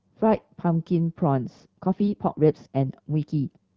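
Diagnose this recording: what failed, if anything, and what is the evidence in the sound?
The network stage let AMR bit errors through, in two short bursts at 0.34 to 0.42 s and 2.02 to 2.18 s. The speech holds its pitch and level but turns hoarse and gargly, as a few percent of the weakly protected bits arrive flipped in those frames.

From 1.71 s to the end, the speech suddenly runs about 1.45 times faster at the same pitch, sounding rushed. That's likely a time-stretch, dropping short slices to shorten the section, and the AMR-WB coding stays clear through it apart from the second bit-error burst.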